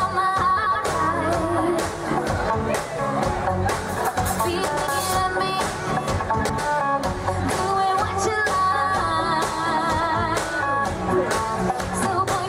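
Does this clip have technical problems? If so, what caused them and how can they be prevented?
Yes. There are frames out of order at 0.57 to 0.76 s, 4.67 to 4.87 s, and 6.39 to 6.59 s. In each case, two neighbouring blocks of about 93 ms were decoded in swapped order. The sound there becomes a brief garbled flutter. Each block's length fits a run of four frames. No time is lost. Buffering and reordering packets by sequence number before decoding prevents this.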